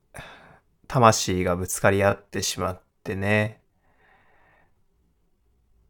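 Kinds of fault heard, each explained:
Time-stretched section: from 1.94 s to the end, speech slows to about 0.74 speed without pitch change, sounding dragged, likely from stretching software; spectrogram shows elongated harmonics.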